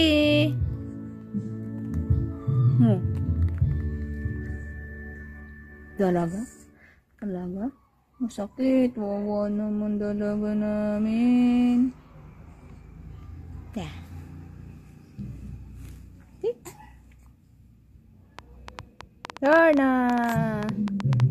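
From 4.42 s to 12.27 s the audio goes through a call bitrate drop: the sound turns coarse and watery and loses its top end, which fits the encoder being pushed from around 96 kbps down to 16 kbps, holding at its lowest for about 5.8 s before recovering. Unlike packet loss, nothing goes missing or stutters; the signal stays continuous but thinner and rougher, and the bandwidth returns once more bits are allowed. From 18.39 s to the end at 21.30 s a train of clicks runs over the audio, about 8.4 per second at an uneven pace, peaking roughly 10 dB above the signal and audible in pauses as well. These are near-identical pulses rather than the random, varied crackle of a dirty contact or the gaps of dropouts, most likely caused by electrical interference from nearby equipment or a faulty connection or power supply.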